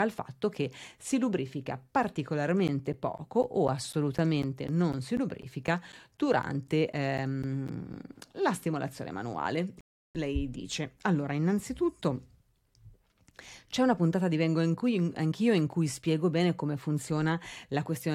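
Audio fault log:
2.68 to 7.94 s, periodic USB or driver dropouts: steady ticking in the speech every 0.25 s, roughly twenty of them, ending just before "la stimolazione manuale". Something is stalling the USB bus or audio driver on a fixed schedule, and each time around 10 ms of audio gets dropped and replaced with silence. Those short, evenly spaced holes are what you hear as regular clicks, and only while the speech is sounding.
9.81 to 10.15 s, rebuffering stall: right after "la stimolazione manuale" the sound goes dead for about 341 ms, then picks up exactly where it left off. The player ran out of downloaded audio and waited for more to arrive. Nothing is missing from the speech, but that pause is extra time added to the clip, which is why it lands as an unnatural freeze rather than a cut.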